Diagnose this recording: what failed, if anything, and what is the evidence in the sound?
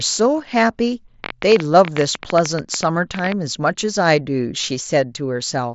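Likely interference in analogue wiring injects pulses: a train of clicks from 1.24 to 3.33 s, about 12 irregular pops per second, peaking about 15 dB above speech.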